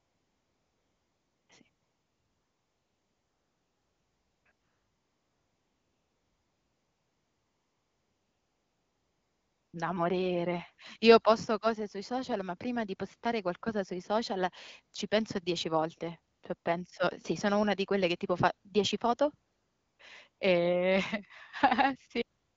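AMR comfort noise fills the gaps at 0–1.49, 1.69–4.45, 4.51–9.73, 16.35–16.43, 16.57–16.65 (right before "sì sono una di"), 19.51–19.99, 20.29–20.39 and 22.39–22.57 s. The phone stopped sending speech frames there, so the real background drops out for a smooth synthetic hiss that switches in and out.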